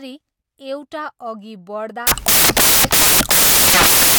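From 2.07 s to the end, the speech turns into loud, harsh broadband noise: samples built from the wrong bytes, so the low bits dominate.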